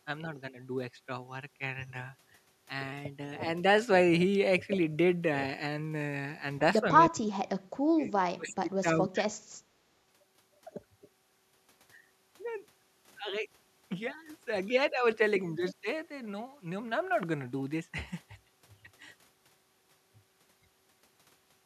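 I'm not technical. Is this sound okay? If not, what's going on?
No. Speech suppressed in double talk: the voice drops sharply or cuts out in pieces at 7.08–7.66 s, 7.95–8.02 s and 8.28–9.37 s. The likely cause is the echo canceller mistaking this speech for echo while the other person talked, and turning everything down.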